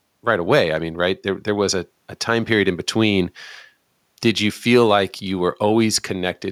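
No technical faults are audible anywhere in the speech recording.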